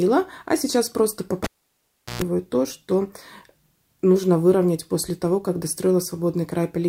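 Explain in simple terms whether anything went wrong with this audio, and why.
At 1.44 s there's a classic cable pulled and plugged in: a pop, about 0.73 seconds of near silence, then roughly 0.12 seconds of 60 Hz mains buzz as the plug tip touched first, and a second pop when sound returns at 2.22 s.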